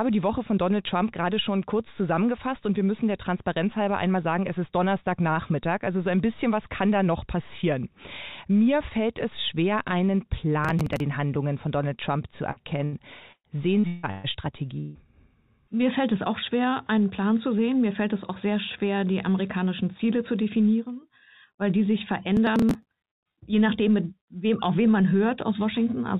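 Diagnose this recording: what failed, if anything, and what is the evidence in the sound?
Driver or buffer stage: processor overload crackle at 10.65–11.00 s and again at 22.37–23.07 s. Bursts of gritty tearing ride on the sound. Each tear is a short skipped piece, which fits missed deadlines on roughly 10 ms buffers, with about twice as many misses in the second burst.

Network stage: a burst of packet loss at 12.51–12.59 s and another at 12.84–12.95 s. The receiver extends the last sound and fades it, 51 ms and then 80 ms of fill. The audio resumes with about 40 ms and 80 ms missing.

Network stage: repeated packet loss (robotic sound) from 13.32 to 14.27 s. Four holes, the longest 158 ms, are each patched by continuing the previous sound. That leaves choppy, robotic audio, with 46% of the span concealed and 440 ms of material gone.

Network stage: at 14.80–14.98 s the last sound is held and fades for 151 ms without reaching silence, and 160 ms of audio is lost before playback picks up further on. 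The likely cause is a long network dropout. Throughout, nothing is heard above 4 kHz, consistent with G.711 mu-law on the WebRTC call path.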